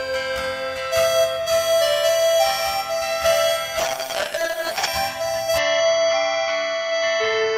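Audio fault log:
3.85–4.99 s, call bitrate drop: encoding falls from 64 to 8 kbps, so the music turns coarse, watery and muffled as its high frequencies are discarded.
5.58 s onward, input switched to a poorer device: the music suddenly dulls, losing everything above 6.5 kHz, with faint new background noise, likely from a narrower-band microphone.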